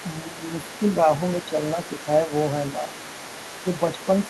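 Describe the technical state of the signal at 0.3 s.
The echo canceller likely left part of the loudspeaker signal in the microphone, so the other side's voice leaking through sits faintly under the speech, roughly 15 dB down, across the whole clip. Between 0.23 and 0.4 s the canceller likely mistook simultaneous talk for echo, producing speech suppressed in double talk: the talker dips by around 5 dB for about a tenth of a second.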